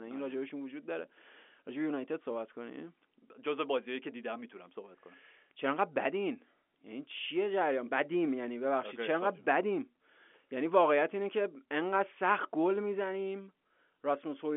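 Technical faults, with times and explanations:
The speech carries the band of an ordinary G.711 telephone line, roughly 250 Hz to 3.4 kHz with nothing above 3.7 kHz, and no technical fault can be heard in it.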